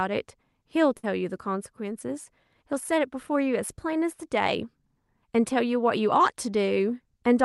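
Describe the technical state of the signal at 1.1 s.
At 1.1 s the speech has just resumed after a burst of packet loss from 0.97 to 1.05 s. The receiver stretched the preceding sound into a fading fill, then skipped ahead.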